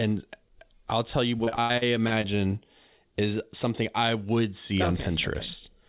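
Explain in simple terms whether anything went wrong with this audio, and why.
Repeated packet loss (robotic sound) runs from 1.44 to 2.25 seconds, just after "I'll tell you": seven short dropouts, the longest 81 ms, were patched by stretching the previous sound, so the speech turns choppy and robotic.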